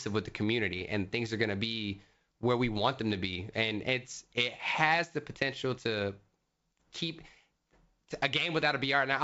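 At 0.79 to 0.82 s, between "with the" and "and things are gonna", a short burst of bit errors on an ADPCM link breaks through: a pop followed by a rough, gritty smear lasting roughly 40 ms, with a brief change in level. Flipped bits corrupt the decoder's adaptive step size and predictor state, so each error keeps ringing after the bad bit itself. The short extent points to a low error rate, around a tenth of a percent, hitting only a few frames. The surrounding G.722 wideband coding, consistent with the full 64 kbit/s mode, carries the speech with at most faint coding damage.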